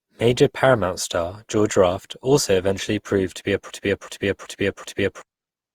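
From the start, the speech has the swirly, smeared and hollow character of generation loss. Attacks blur, worse than a single encode at this quality would produce. The likely cause is repeated lossy re-encoding, which fits around seven passes through Opus at about 64 kbit/s. Each pass quantises again on a shifted frame grid, so the noise stacks up.

At 3.7 s a broken-record loop begins and runs to 5.22 s. A 0.38 s fragment repeats exactly, back to back, four times, giving a stuttering, mechanical cycling of the same sound. The pattern points to a stall in the player, encoder or stream that kept sending the last buffered fragment. Whatever audio belonged in that stretch is missing.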